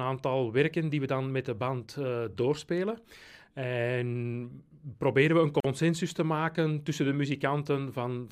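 A 43 ms gap at a join of encoded pieces, from 5.60 to 5.64 s: separately encoded segments with untrimmed encoder delay and padding, appearing as a blank vertical strip with smeared edges.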